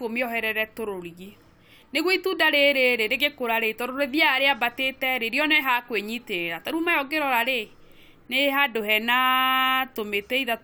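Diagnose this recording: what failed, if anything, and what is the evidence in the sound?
Nothing in the recording points to a failure at any stage of the chain. The speech runs on steadily, with nothing heard that calls for a diagnosis.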